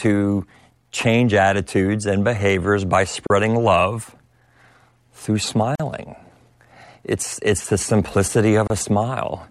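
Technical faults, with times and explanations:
3.27 to 8.70 s, gaps at joins of encoded pieces: Silences open at 3.27 to 3.30 s, just after "attitudes and behaviors by", at 5.75 to 5.80 s, and at 8.67 to 8.70 s, lasting about 33, 43 and 28 ms. The pieces were encoded separately and joined untrimmed. Each keeps its encoder's start delay and last-frame padding. Edges are smeared by the codec, and the speech resumes where it stopped.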